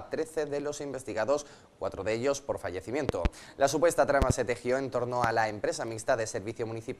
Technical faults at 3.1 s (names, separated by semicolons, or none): loud pop